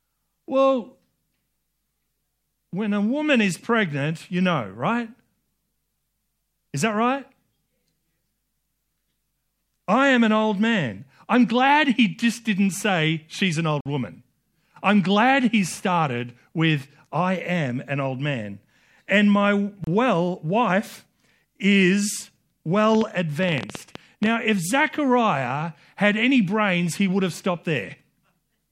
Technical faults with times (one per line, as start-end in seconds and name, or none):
13.81-13.86 gap between stream segments
19.84-19.87 gap between stream segments
22.95-24.27 train of clicks